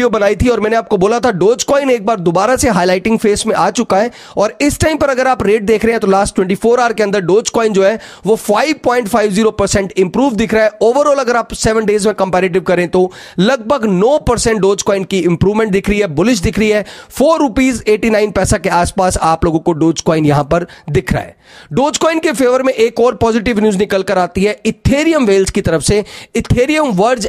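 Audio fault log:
No fault is heard anywhere in this audio.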